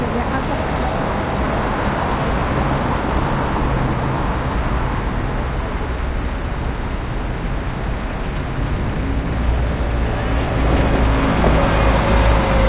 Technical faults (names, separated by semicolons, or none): none